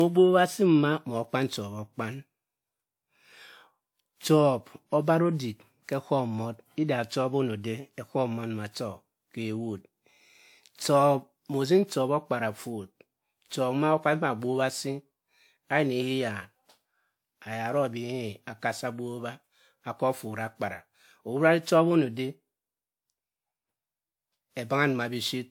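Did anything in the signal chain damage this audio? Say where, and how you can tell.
Yes. At the codec stage the speech carries generation loss across the whole clip. It sounds swirly, hollow and smeared, and consonant attacks blur more than one pass at this quality would cause. The likely cause is repeated lossy re-encoding, roughly five passes, with a character that fits WMA at about 128 kbit/s. Each pass requantises on a shifted frame grid, so the damage compounds. A spectrogram would show ragged, flickering holes between harmonics, smeared onsets, and nothing above 20.1 kHz.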